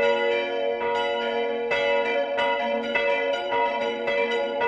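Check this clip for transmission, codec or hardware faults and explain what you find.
One fault stands out, a time-stretched section. It runs from 2.00 s to the end of the clip at 4.67 s. Here the pace suddenly jumps to about 1.7 times the original speed, while the pitch stays where it was. The likely cause is software squeezing the audio to fit a shorter length. It keeps the pitch by dropping short pieces of the waveform. The result sounds rushed.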